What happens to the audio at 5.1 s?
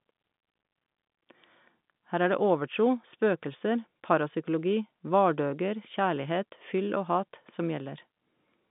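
Nothing goes wrong at 5.1 s: the speech carries on intact through the G.711 telephone coding, with its usual narrow line band that stops below about 3.7 kHz.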